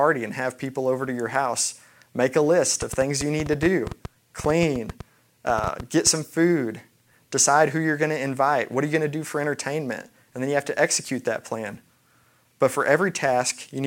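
A train of clicks runs from 2.82 s to 6.08 s in this speech clip, starting just after "house make a list" and stopping before "some food decide who". Around thirty near-identical pulses arrive at about 7.4 per second, spaced unevenly, and they tick over both the speech and the gaps between phrases, peaking a few decibels above the speech itself. The likely cause is interference from nearby equipment or a faulty connection or power supply.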